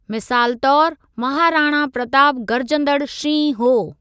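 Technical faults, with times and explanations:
No technical faults can be heard anywhere in this speech recording.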